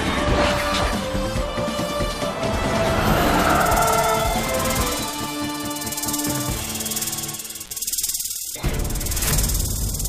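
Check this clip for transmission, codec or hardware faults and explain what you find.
One hardware fault is audible: an intermittent contact from 7.64 to 7.71 s. A loose plug or cable briefly opens the line for about 48 ms, so the audio cuts out with crackle at both edges and faint hiss underneath. The crackle and hiss separate it from a packet-loss dropout's clean digital silence.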